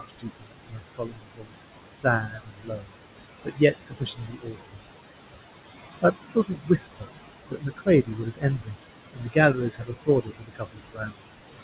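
Speech, heard through a narrowband call path with nothing above 4 kHz (consistent with G.711 mu-law at 64 kbps) and room noise only about 8 dB below the voice, shows noise suppressor artifacts across the whole clip. The suppressor pulls the background down by about 19 dB band by band, so the noise dips in pauses and swells back under speech. Speech cut by the noise suppressor occurs at 0.0–1.54 s, 1.97–2.97 s, 3.45–4.84 s, 6.31–7.09 s, 7.49–8.76 s, 9.15–9.36 s and 9.54–11.27 s, with drops of about 17 to 22 dB. In these spans the suppressor mistook parts of the speech for noise, so soft consonants and word endings sound swallowed, for well over a second in the longest spans.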